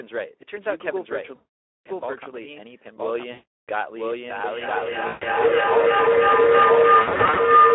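Throughout, the speech carries a doubled audio track: a second full-band copy trails about a second behind at roughly equal level, most likely from a slower parallel capture path. The Speex codec at 11 kbps confines the sound to a 300 Hz to 3.5 kHz line band and leaves it plainly hoarse and noisy. VoIP packet loss concealed by the speech codec appears at 1.35 to 1.87 s and 3.31 to 3.70 s, where the decoder extrapolates from its last pitch and filter into a fading buzz or coloured noise. From 4.44 s to the end, a feedback howl builds near 1 kHz, its loop repeating roughly every 0.3 s and peaking about 11 dB above the speech. Within it, concealment recurs at 5.07 to 5.26 s and in short scattered gaps from 7.01 to 7.43 s.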